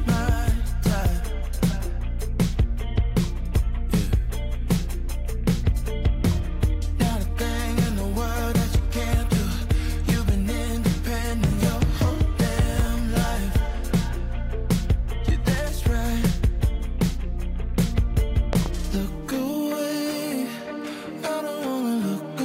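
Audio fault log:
12.80–12.82 s, loud pop: A single sharp pop sits on top of the sound, which carries on beneath it. It peaks about 5 dB above the surrounding audio. A sudden voltage step, likely from a plug, switch or static, entered the signal chain and was shaped into a brief pulse.
18.53–18.68 s, loud pop: Two pops come in quick succession, peaking about 15 dB over the sound. This is a stronger voltage pulse, likely from a switch or driver glitch.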